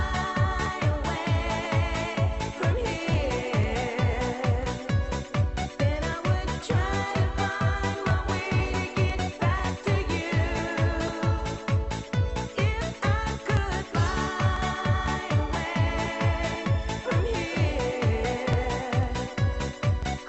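From 0.17 s to the end, periodic USB or driver dropouts skip a little audio every 0.50 s, as a background task stalls the bus or driver. Each gap is heard as a regular tick, over sound already limited to about 8 kHz by the call codec.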